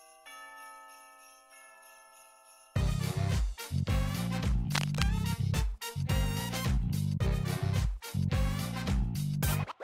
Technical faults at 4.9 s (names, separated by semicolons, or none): cable scratch noise